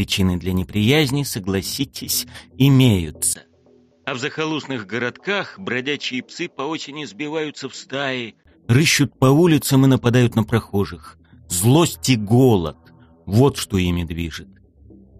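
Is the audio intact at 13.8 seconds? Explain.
Yes, at 13.8 seconds the audio runs cleanly, with no dropout, click, distortion or other break in the sound.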